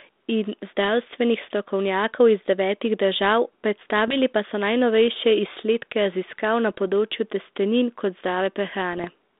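Three short hits of bit errors on an ADPCM link, at 4.08 to 4.20 s, 6.71 to 6.78 s just before "področju testenin", and 8.93 to 9.07 s. A tiny scattering of flipped bits knocks the decoder's step size and prediction off track, so each error rings on as a pop, a rough burst and a brief jump in level.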